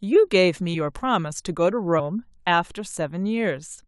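Compressed frames skipped: at 0.73 s the decoder drops whole blocks of the encoded speech, either missing from the stream or rejected as damaged, so playback jumps ahead by about 50 ms. That fits two frames of 23.2 ms. From 1.99 to 2.01 s a larger jump of about 100 ms suggests four lost frames. At each join a slice of speech simply goes missing.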